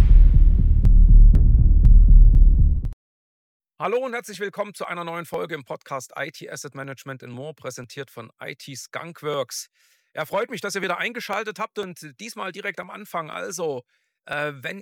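A steady tick runs from 0.85 s to 14.33 s, repeating every 0.50 s, about thirty small clicks in all, each audible only where there is signal beneath it. These are periodic USB or driver dropouts: at a fixed interval the audio path stalls and roughly a millisecond of samples is skipped outright, so the waveform jumps across the gap. That abrupt discontinuity is what produces each evenly spaced click.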